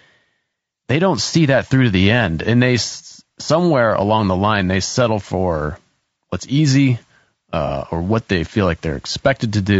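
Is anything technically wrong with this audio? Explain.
Yes, there are two faults. Low-delay AAC compression affects the whole clip. The speech sounds rough and grainy, with noise filling the gaps between harmonics. This likely comes from AAC-ELD, whose short frames resolve pitch poorly, and the damage is plain enough to suggest a bitrate around 32 kbps.

AAC frame loss with concealment occurs from 7.67 to 7.72 s, just before "or what they feel". The decoder patched over missing data using the last good spectrum, leaving a brief smeared, noisy blip that points to a single lost frame.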